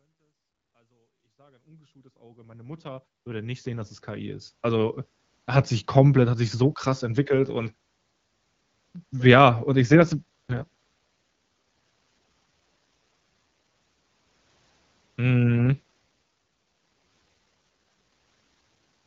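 A speech clip, faded in over its first 4.6 s, turns rough and synthetic from 9.87 to 12.58 s and again from 15.46 to 18.94 s, with no gap or loss of bandwidth. This is an AMR rate drop: the wideband codec falls back, consistent with 12.65 to 6.6 kbit/s, to protect a weak radio link.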